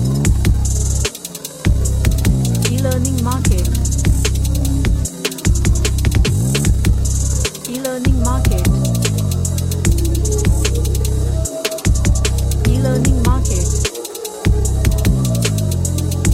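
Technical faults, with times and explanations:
Nothing technical stands out here at all, so there's nothing to list for this one.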